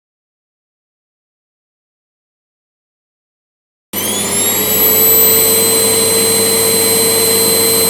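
No technical faults can be heard anywhere in this recording.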